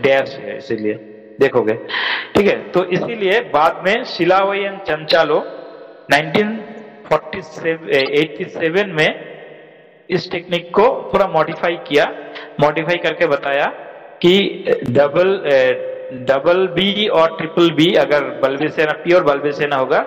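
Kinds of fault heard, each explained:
Corrupt frame decoded: Damaged compressed frames were played rather than concealed. Misread data put energy at wrong frequencies. Short chirps or noise bursts sound at 0.94–0.97, 4.07–4.09, 7.99–8.09, 11.51–11.54 and 18.58–18.63 s. The later three are loudest, about -10 dBFS.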